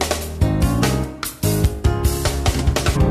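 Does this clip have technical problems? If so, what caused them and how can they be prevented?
Yes. From 2.95 to 2.97 s, about 23 ms, there is damaged data in a compressed stream. Some of the encoded bytes in that region are wrong, so the decoder either misreads or rejects the affected frames, loses synchronisation and scans forward for the next valid frame header before playback resumes. Prevent it by transferring and storing files with checksums, using a transport that retransmits lost data, and keeping metadata out of the audio payload.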